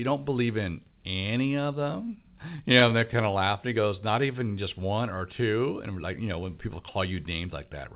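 Repeated stalls (stutter) run from 2.16 to 3.34 s, right after "in any of them": fifteen brief dropouts, none longer than 16 ms, where late packets emptied the jitter buffer and the last sound was stretched, so the speech catches and drags without losing anything. A jitter buffer slow-down follows from 3.81 to 4.56 s, just before "just one or two": the receiver repeated single pitch periods to rebuild its reserve, adding about 70 ms and slowing speech to 92% at the same pitch, through audio that stops near 4 kHz.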